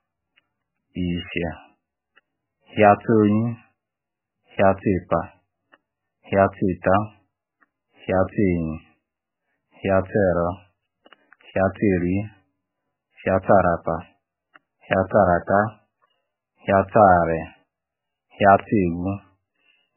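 Throughout the speech, MP3 compression at heavy damage is likely: the sound is watery and swirly, and nothing reaches above 3 kHz. That points to a very low bitrate, around 8 kbps. Unlike a plain low-pass filter, weak spectral detail flickers in and out between frames.

From 3.12 to 3.14 s and again from 18.60 to 18.62 s, a single loud pop stands roughly 15 dB above the speech, which continues beneath it. A brief voltage step, likely from a plug, switch or static, causes each one. It is one isolated pulse, not a crackle or a dropout.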